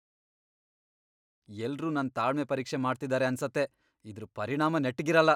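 A speech recording with no technical faults to report.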